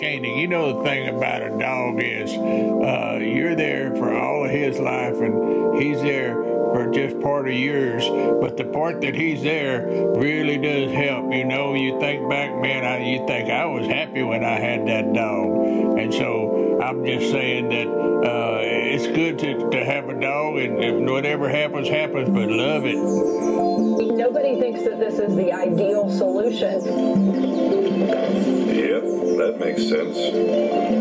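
Throughout the recording, the level lurches by roughly 10 dB. Loud and quiet passages end up squashed close together. This is gain pumping, likely from the input gain being set far too high for the microphone, so that a fast limiter or compressor clamps down on every peak and releases again in the pauses. The band-limited top end, with nothing above 8 kHz, is the call microphone processing.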